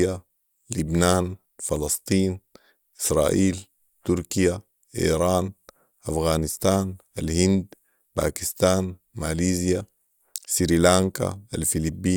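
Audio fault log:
Nothing to flag here, as this speech recording shows no audible faults anywhere along its run.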